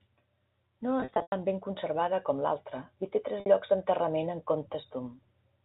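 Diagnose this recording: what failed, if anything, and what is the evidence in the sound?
The network stage failed: packet loss with pitch repetition. From 1.00 to 1.32 s, about 200 ms of speech drops out in scattered gaps, the longest 100 ms, before "tan ben conservada com". A buzzy held pitch fades toward silence. At 3.40 to 3.46 s, between "com l'altra i té" and "llocs d'enterrament en", 60 ms is bridged by repeating the last pitch period.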